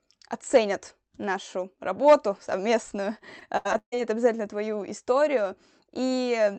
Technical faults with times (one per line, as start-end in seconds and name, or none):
3.39-3.94 repeated packet loss (robotic sound)